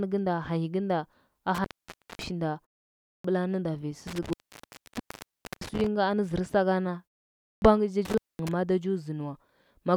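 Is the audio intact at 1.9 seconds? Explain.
No, the speech cuts out with crackle at the edges, leaving faint hiss, from 1.55 to 2.26 s after "gɚnda a": an intermittent contact, a loose connection opening for about 0.55 s.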